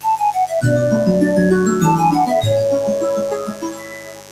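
A steady, raspy buzz sits under the whole clip, roughly 10 dB below the sound: mains buzz from switching spikes on the 50 Hz supply, with harmonics reaching into the kilohertz range. Throughout, the level pumps and sustained parts thin out, swinging by around 15 dB. A noise suppressor made for speech was applied to this sound, treating steady content as noise. From 3.17 s to the end the sound sinks by up to about 14 dB. Here the noise suppressor took the sound for noise and pulled it down.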